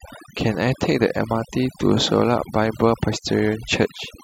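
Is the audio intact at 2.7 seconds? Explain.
No. At 2.7 seconds the speech is affected by overdone noise removal, which runs through the entire clip rather than starting or stopping at that point. The noise reduction was set too aggressively, so individual frequency bands sitting close to the estimated noise level are pulled far down or cut out, taking the quieter parts of the voice with them. The background drops and breaks up into twinkling specks.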